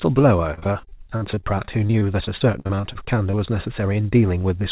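From 0.54 to 3.35 s the speech breaks up with repeated packet loss, giving a robotic sound. Packets keep arriving late or not at all. Each hole is bridged by stretching the last piece of sound, and another hole comes soon after. The gaps are short, none longer than 50 ms, but there are dozens of them. About a fifth of the stretch is patched this way. The result is choppy, with pieces missing. All of it sits within a band that stops at 4 kHz, which fits a narrowband call codec.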